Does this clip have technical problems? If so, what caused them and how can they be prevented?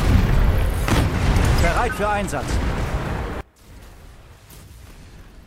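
Yes. From 3.41 s to the end at 5.47 s, the level collapses by about 26 dB and what remains is only a faint residue. The likely cause is one channel inverted: one stereo side has flipped polarity, so the material the two channels share cancels when they are summed to mono. A dropout or sudden fade would lower everything evenly, but here the residue is the faint difference between the channels. To prevent it, check polarity on each channel and monitor a mono fold-down before delivery.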